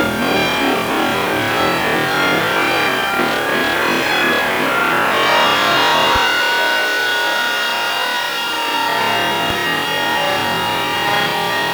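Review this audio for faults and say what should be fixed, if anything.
Low bit depth without dither runs through the whole clip. The sound is coarse and grainy, and the grit rises and falls with the level. Quiet passages break up or stutter rather than fading smoothly. This likely comes from rounding to about 5 bits with no dither, so the error tracks the signal at roughly 20 dB below it. A waveform shows visible staircase steps. A spectrogram shows harmonic hash that follows the signal instead of an even noise floor. To prevent it, keep at least 16 bits and apply dither before any reduction in word length.

A loud pop occurs from 6.16 to 6.18 s and again from 9.50 to 9.53 s. Each is a single sharp crack, roughly 10 dB above the surrounding sound, and the audio continues beneath it. The likely cause is a voltage step or pulse from a switch, plug, static discharge or driver glitch. On a waveform each one appears as a narrow spike towering over the program. 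On a spectrogram each shows as a thin vertical line spanning all frequencies. To prevent them, mute or ramp outputs when switching, secure connectors, control static and keep audio drivers stable.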